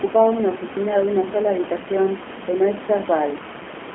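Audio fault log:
Throughout, G.729 codec. Speech is squeezed into roughly 200 Hz to 3.4 kHz. It sounds plainly rough and synthetic, which fits an 8 kbit/s model-based voice coder.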